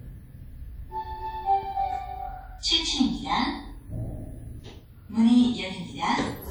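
An everyday-sound recording, about 6.5 s long, carries plainly audible WMA compression damage from start to finish, likely from encoding at a rate around 48 kbps. The transform coder smears its quantisation noise over long blocks, so transients ring and textures turn washy, with a hiss that swells and recedes with the sound. Quieter spectral detail drops out as weak components are zeroed, although content still reaches about 20.1 kHz, so no low-pass cut is involved.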